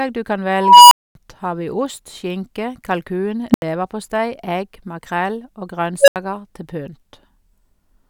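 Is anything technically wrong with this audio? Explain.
Yes, there's an unstable filter going haywire three times in this speech. A recursive stage ends up with bad coefficients, so its output feeds on itself and grows until it clips, overflows and drops out. At 0.54 to 1.15 s, right after "du kan", a tone around 1 kHz swells over about 0.37 s, then 0.24 s of silence before "har vi". At 3.51 to 3.62 s, just before "leverpostei egg makrell", a low squeal near 200 Hz blows up in 32 ms, then cuts out for 80 ms. At 6.01 to 6.16 s, a tone near 500 Hz builds in 71 ms, followed by another 80 ms gap.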